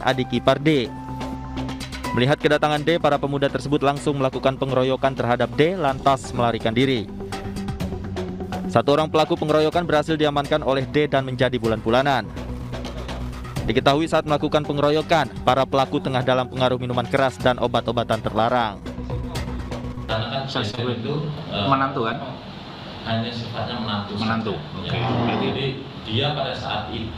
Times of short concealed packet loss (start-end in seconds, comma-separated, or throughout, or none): 19.95-19.99, 20.71-20.79